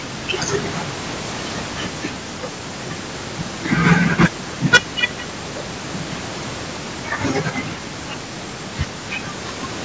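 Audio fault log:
3.73–4.25 s and 4.73–5.04 s, hard clipping: crackle on the peaks in the first stretch, then a harsh fuzz across the loud sound in the second. The signal overdrives a stage by about 6 dB, then about 21 dB, so its peaks are cut flat and spray harmonics up to the call's 8 kHz ceiling.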